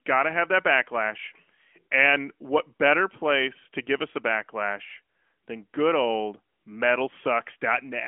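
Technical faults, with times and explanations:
No faults found; the audio runs through an AMR narrowband mobile codec path with nothing above 3.8 kHz and only light codec colouring.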